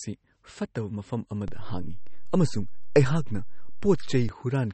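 Speech throughout, with plainly audible MP3 compression damage that most likely comes from a low-bitrate encode, with the sound fitting something around 32 kbps. Nothing remains above 8.4 kHz, so sibilants lose their top and the speech sounds dull and narrow. With so few bits available, the encoder discards weak spectral lines, and they flicker in and out between frames, giving a watery, swirly texture and smeared consonant onsets. A DC step also occurs. At 1.48 s the waveform's zero line jumps to an offset, heard as a low thump while the speech continues unchanged. The offset lasts until 4.29 s. The thump comes from the sudden baseline shift, such as a converter recalibrating or an offset input being switched in, and not from the speech itself.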